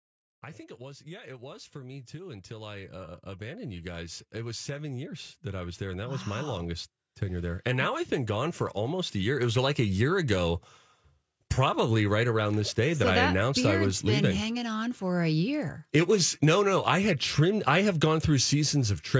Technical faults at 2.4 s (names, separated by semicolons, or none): automatic gain rising